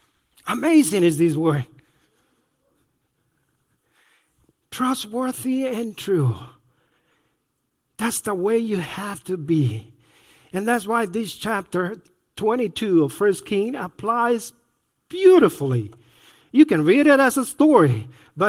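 No technical faults heard.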